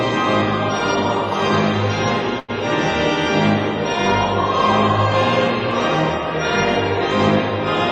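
At 2.39 to 2.51 s a sound hangs on too long, with a faint buzzy smear before the audio picks up where it left off. It's a short stall from a late packet: the jitter buffer ran dry, so the receiver stretched the last sound for about 91 ms until the data arrived. Nothing was lost, but the audio now runs about 91 ms later.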